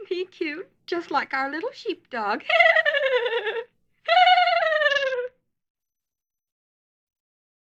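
A Bluetooth SBC bit pool drop runs from 4.90 s to 5.80 s. The link appears to have come under strain, and the sending device cut the SBC bit pool from a moderate setting to a very low one. The sound points to a rate of about 66 kbps. With so few bits, the highest sub-bands are starved and the rest are coarsely quantised. For just under a second the treble goes dull and a gritty noise rides on the audio, then full bandwidth returns.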